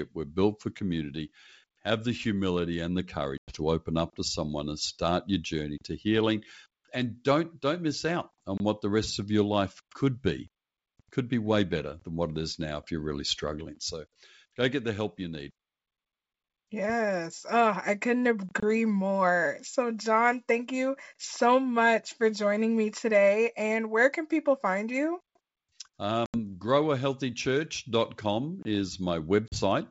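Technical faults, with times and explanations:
3.38–3.56 s, 26.26–26.38 s and 29.48–29.60 s: packet loss on an ADPCM call. Hard-edged silences of 100, 80 and 40 ms replace missing data, the first between "the humility and the" and "to open up to". That pattern fits a few lost packets each time. Afterwards the decoder's predictor and step size no longer match the sender's, so the sound resumes slightly distorted until it resettles.
8.58–8.60 s, 18.60–18.63 s and 28.63–28.65 s: gap between chunks. A 25 ms hard-edged silence appears every 10 s, after "don't don't miss out" and before "what the rest of", then after "I couldn't". No audio is lost. Each join is likely padded or the next chunk starts late.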